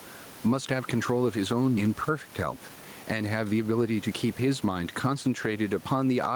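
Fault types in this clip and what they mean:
Gain pumping: The background noise, sitting about 29 dB below the speech, rides under a gain swing of around 10 dB, leaving levels squashed together. The likely cause is input gain set too high, with a fast limiter clamping every loud peak.
Skip ahead: At 1.77 s the speech jumps straight forward with no gap, and roughly a second of audio is missing. A stretch was discarded while later audio was already queued, so the two sides of the cut are spliced almost directly.
Jitter buffer speed-up: From 1.87 to 5.16 s the speech runs about 109% of normal speed at an unchanged pitch and sounds hurried. The receiver was holding too much buffered audio and trimmed many short pitch-period pieces, about a third of a second in total.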